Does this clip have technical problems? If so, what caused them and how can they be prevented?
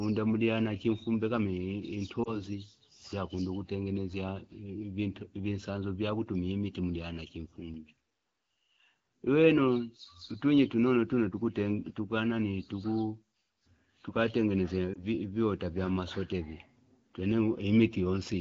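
Yes. Lost AMR speech frames cause two short disturbances in the speech, at 2.23 to 2.41 s and at 14.94 to 15.04 s, just before "viota vya". Each sounds like a single 20 ms frame went missing. The AMR decoder fills the gap by repeating the last good pitch and vocal tract settings at reduced gain, so the speech dips and warbles briefly rather than cutting out. It then comes back weak or rough for a moment. That behaviour separates it from a plain dropout or a VoIP jitter-buffer gap, which would leave hard silence or a click. The surrounding speech is clear HD Voice (AMR-WB) at 12.65 kbit/s. Stronger radio coverage or more robust channel coding on the link prevents the corrupted frames in the first place.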